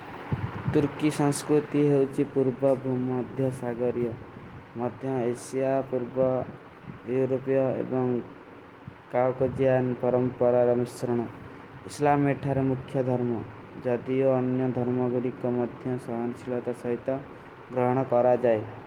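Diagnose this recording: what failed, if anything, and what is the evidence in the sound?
Nothing in the speech recording stood out as a fault on listening, so there is no failed stage to point to.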